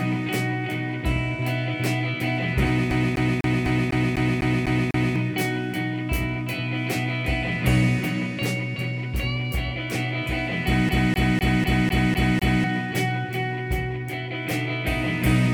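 The audio sticks twice, like a CD stuck on one turn. From 2.91 to 5.16 s, a 250 ms slice repeats nine times. From 10.89 to 12.64 s, the same 250 ms loop repeats seven times. Each jump has a brief mute. A scratch keeps throwing the laser back one track.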